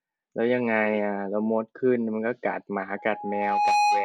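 From 2.98 s to the end, a single tone at 831 Hz swells over roughly three-quarters of a second into a squeal standing a few decibels above the speech. This is loudspeaker feedback squeal: the microphone picks up its own loudspeaker, and at that frequency the loop gain exceeds one, so the tone feeds itself.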